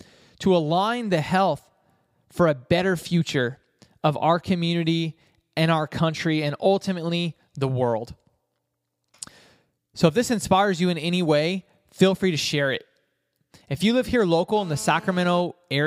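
A speech recording with one fault near its end. Right after "you live here", from 14.56 to 15.41 s, a GSM phone buzz appears. It is a hard, raspy 217 Hz tone with many harmonics, steady, and about 22 dB below the speech. A nearby phone on a call causes it.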